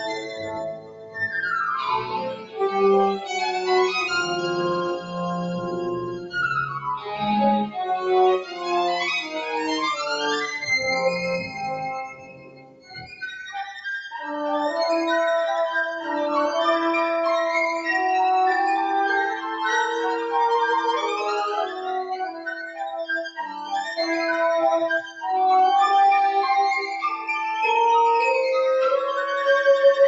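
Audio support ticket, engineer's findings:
Noise suppressor applied to music or sounds, whole clip. Level pumps and flutters, with swings of around 10 dB. Attacks pass while held tones, ambience and decay tails sink. Probable component: a speech-tuned noise suppressor left enabled, treating steady content as noise. Waveform shows an uneven envelope with sustained sections repeatedly dipping. Spectrogram shows steady partials and reverb tails fading in and out while transient onsets stay bright and vertical.

Sound cut by the noise suppressor, at 0.0–3.3 s (deepest about 17 dB), 4.96–9.53 s (about 11 dB), 11.42–13.22 s (about 17 dB), 22.11–23.65 s (about 12 dB) and 25.02–25.24 s (about 11 dB). Suppressor gain clamps on sustained or decaying material, for roughly two seconds in each of the first three stretches, about a second in the fourth and a brief fraction in the last. Waveform shows envelope notches. 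Spectrogram shows darkened horizontal bands and tails truncated early. Band limit near 8 kHz fits the Opus call path.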